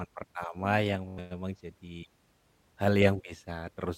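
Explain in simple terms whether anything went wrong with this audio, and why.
Bluetooth stutter at 1.09 to 1.19 s, just after "pertama yang": the wireless link dropped about 85 ms of sound, so the receiver replayed a tiny slice, causing a brief buzzing stutter.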